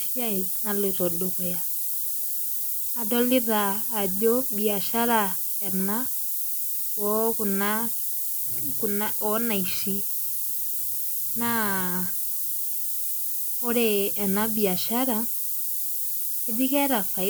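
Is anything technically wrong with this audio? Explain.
Yes. Throughout the speech, low bit depth with noise shaping: 4-bit rounding error is pushed upward, giving a steady hiss near signal level, rising sharply in treble unlike flat tape hiss.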